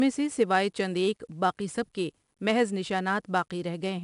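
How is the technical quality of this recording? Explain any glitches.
The technical quality is poor because of 4-bit ADPCM compression throughout. Each sample is coded as a coarse 4-bit step from a predicted value, leaving gritty, level-following hiss on the speech and smeared attacks. A spectrogram shows broadband noise riding under every loud syllable and nothing above 10.6 kHz, which points to a roughly 22 kHz sample rate and about 88 kbps. The waveform looks fuzzy on transients.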